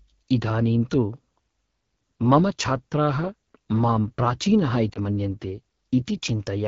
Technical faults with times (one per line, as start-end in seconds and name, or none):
0.00-6.67 AMR wideband (HD Voice) codec
4.93-4.98 lost AMR speech frames